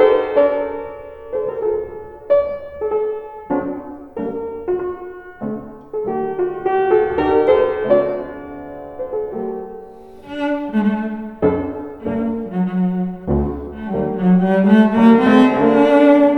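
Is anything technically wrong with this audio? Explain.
No, nothing technically wrong can be heard in this audio. Nothing in the sound points to a problem in how it was captured, processed or played back.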